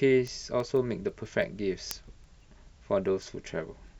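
From 0.11 s to 3.88 s, the speech carries word clock ticks. They arrive at a steady rate, roughly every 0.15 s, about twenty in all. The receiving device is running on its own clock, not locked to the sender's. The two clocks drift apart by something like 150 parts per million. Each time they slip past each other, one sample is dropped or repeated. That slip is heard as a short, sharp tick.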